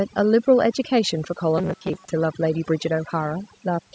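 Throughout the clip, overdone noise removal leaves the pauses near silent, with twinkling specks. These isolated specks set it apart from codec smearing.

From 1.58 to 2.11 s, the speech turns into a rigid, metallic buzz at a fixed 188 Hz. This is robotic sound from repeated short buffers, likely caused by audio arriving too seldom, with about half of the time filled by repeats of a roughly 5 ms buffer.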